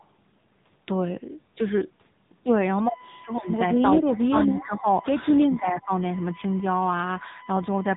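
From start to finish the speech carries the sound of the AMR narrowband mobile codec, and the damage is plainly audible. Nothing above 3.8 kHz survives, so the top of the voice is missing. The codec rebuilds speech from a vocal tract model and a pitch predictor, fed by a few pulses in each 5 ms. The coded quality fits AMR-NB at about 7.95 kbps. Each syllable takes on that synthetic, modelled texture.

Between 3.82 and 4.87 s the speech level dips, by up to about 15 dB, over roughly 0.7 s of that span. The same happens again from 5.43 to 5.91 s, with a dip of up to about 15 dB over roughly half a second. The likely cause is speech suppressed in double talk. An echo canceller heard this talker alongside the far side's sound from the loudspeaker. It could not separate the two, so it turned both down.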